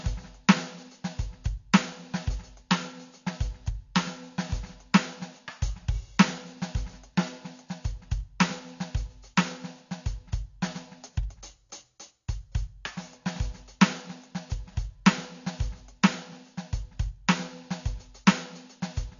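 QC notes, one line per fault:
Throughout, AAC compression: nothing above 7.1 kHz, so the music sounds dull, smeared and warbly. Likely low-bitrate AAC-LC, consistent with about 32 kbps.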